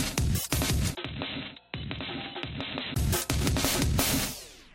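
A clip of everyday sound with two faults. At 0.51 s there is pre-echo. A short hiss, about 14 dB above the floor, smears the quiet 16 ms before a sharp attack. The codec spread its noise across a 26 ms block and never switched to short blocks. From 0.95 s to 2.96 s the input was likely switched to a poorer device. A 20 ms silence marks the change. The sound turns dull, with nothing above 4 kHz. It drops roughly 10 dB, with new background noise sitting around 40 dB below it.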